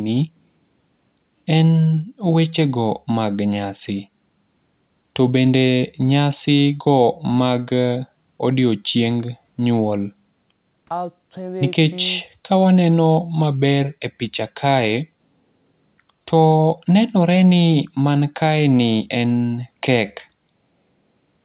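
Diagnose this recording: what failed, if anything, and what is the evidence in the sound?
Nothing failed here; the speech just came through an ordinary call path, and the G.711 A-law codec at 64 kbps gives it that familiar narrowband telephone character with nothing above 4 kHz, which is simply how that codec works.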